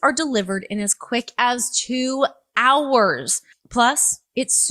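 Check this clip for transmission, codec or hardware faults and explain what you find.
Nothing here points to a transmission, codec or hardware problem; the audio just runs along steadily without anything that catches the ear.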